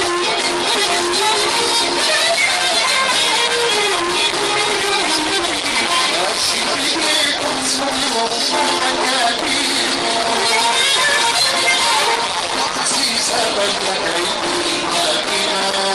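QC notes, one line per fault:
No technical faults are present; the signal holds steady and continuous with nothing in it that departs from normal playback.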